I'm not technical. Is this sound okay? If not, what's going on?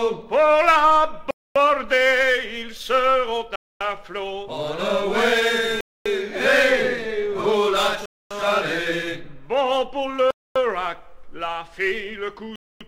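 No, there's a gap between chunks: the audio arrives in 2-second pieces, with quarter-second silent holes at 1.31, 3.56, 5.81, 8.06, 10.31 and 12.56 s.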